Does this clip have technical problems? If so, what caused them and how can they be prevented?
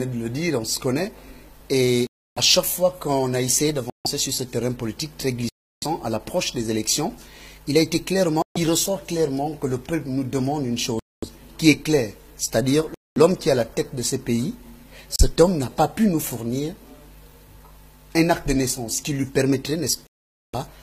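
Yes. The sound cuts to clean silence and resumes at 2.07–2.38, 3.90–4.06, 5.49–5.84, 8.42–8.57, 10.99–11.25, 12.94–13.18, 15.16–15.21 and 20.07–20.55 s. This is likely a Bluetooth stall: the headphone buffer ran dry while delayed packets were resent. Unlike a crackling dropout, each gap is true silence. Keeping the phone close and away from Wi-Fi congestion prevents it.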